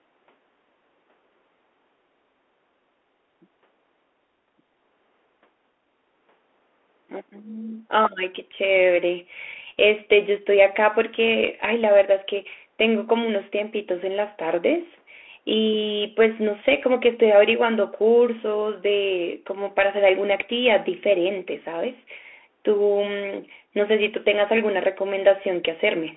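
A speech recording carrying the Bluetooth CVSD headset codec from start to finish. The speech sits in a narrow telephone band of 300 Hz to 3.4 kHz. Nothing reaches above 4 kHz. CVSD codes each sample as one up-or-down bit, which fits a 64 kbps link. Its adapting step cannot keep up with loud high sounds. The damage is plainly audible. The s sounds turn scratchy, bright peaks distort, and a granular hiss lies under the speech.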